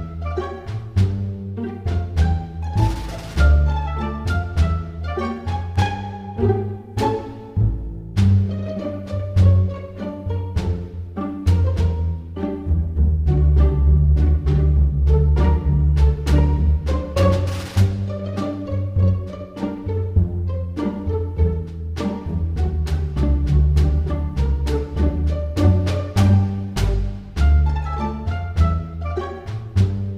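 Dropped samples at 20.17 s: a single sharp click, most likely caused by a couple of samples going missing from the stream, a tiny fraction of a millisecond. The waveform jumps straight to a later value, and that step is heard as a brief tick, too short to remove any sound.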